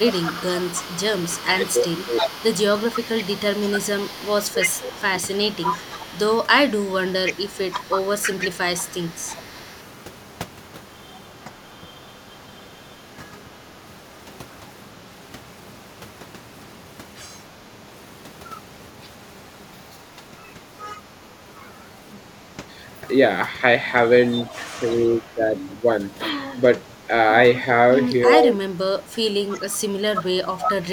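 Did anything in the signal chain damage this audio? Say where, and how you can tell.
Yes, the damage sits in call processing. There's echo leak from 0.0 to 12.63 s, briefly at 24.31 s, and again from 28.25 to 30.23 s: a copy of the speech about 0.32 s late, roughly 15 dB down, louder near the end. The likely cause is a far-end echo canceller letting loudspeaker pickup through.

Speech suppressed in double talk shows up from 0.4 to 7.67 s, 11.44 to 13.21 s, 20.17 to 21.34 s, and 24.55 s to the end. The voice ducks in short pieces, by up to about 20 dB. That's likely the canceller clamping down while both sides overlap.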